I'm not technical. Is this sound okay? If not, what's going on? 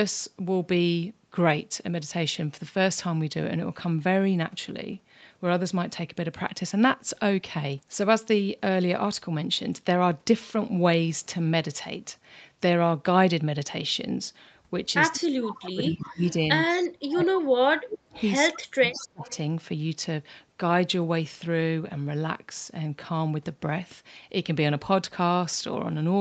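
No. Two related problems show up between about 15 and 19.3 seconds.

Echo leak, at 15.13 to 15.56, 16.29 to 16.33, 16.8 to 16.85, 18.14 to 18.57 and 18.91 to 19.33 seconds: a faint copy of the speech comes back about 0.19 seconds late. The likely cause is that one caller was on a loudspeaker, and their phone's echo removal didn't fully cancel what its microphone picked up, so some of the call was sent back. The first scrap is the clearest. The later ones are fainter.

Speech suppressed in double talk, at 15.16 to 16.34, 17.04 to 18.19 and 18.57 to 19.29 seconds: the talker's voice drops sharply while the other side is speaking, and by the last stretch it nearly disappears. This likely happens because, with both people talking at once, the echo removal couldn't tell the real talker from the echo and turned both down. About a second of speech is affected in each of the first two stretches, and a bit less in the third.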